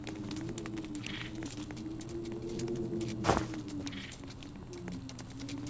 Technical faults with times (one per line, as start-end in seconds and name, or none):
1.46-1.48 skip ahead
1.55-2.50 jitter buffer speed-up